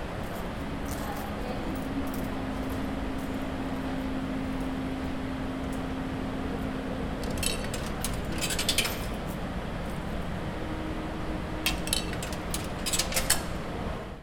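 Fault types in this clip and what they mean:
Nothing stood out on listening to this recording of sounds.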